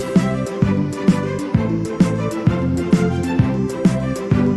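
No technical faults can be heard anywhere in the clip. It has come through a WebRTC call path with an Opus-type codec, and its high end stops at about 12 kHz.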